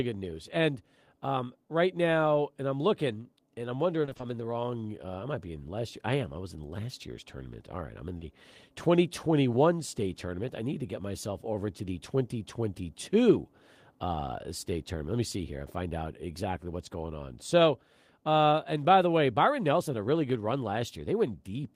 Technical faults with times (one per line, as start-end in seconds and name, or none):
4.01-4.25 repeated packet loss (robotic sound)
8.17-8.23 short concealed packet loss